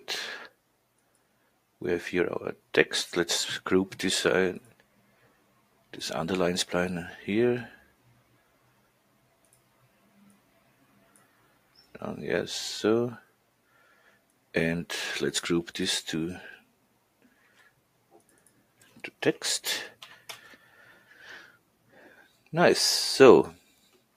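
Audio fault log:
throughout: noise suppressor applied to music or sounds. A speech-oriented suppressor stays active across the whole clip and keeps judging sustained, steady material to be noise. Its gain moves up and down by roughly 5 dB as it changes its mind, so the level breathes and flutters rather than holding still. Sharp onsets pass mostly intact, while held tones, ambience and reverberant tails get pulled down and thinned between them.
0.99–1.55 s, 4.6–5.93 s, 7.77–11.99 s, 13.21–14.54 s, 16.59–19.21 s, 20.56–21.16 s, 21.47–22.5 s, 23.57–24.16 s: sound cut by the noise suppressor. In each span the suppressor classifies the ongoing sound as noise and attenuates it harder than the surrounding material, by about 12 dB at its deepest and about 9 dB in the 20.56 s span. Sustained and decaying parts sink or have their tails chopped short, while transients still punch through. The longest stretch, from 7.77 to 11.99 s, is dipped for most of four seconds.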